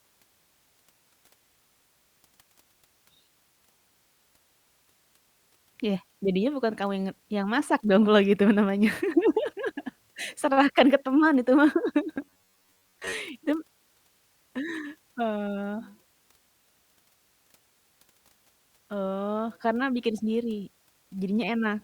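Robotic sound from repeated short buffers runs from 12.16 to 13.15 s. The speech becomes a rigid, metallic buzz at 94 Hz that only roughly tracks the words. The likely cause is audio arriving too seldom, so a buffer of about 10.7 ms keeps looping in place of most of the real signal.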